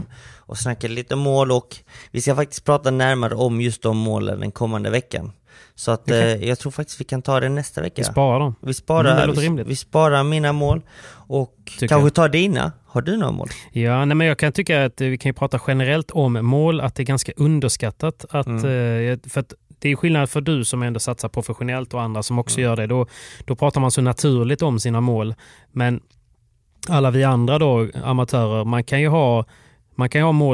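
No audible technical faults occur.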